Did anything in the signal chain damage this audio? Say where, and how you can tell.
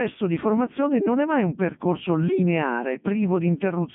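Yes, at the codec: a Codec 2 vocoder resynthesises the speech from pitch and envelope parameters, giving robotic, buzzy tone throughout, nothing above 3.6 kHz, consistent with its 3.2 kbit/s mode.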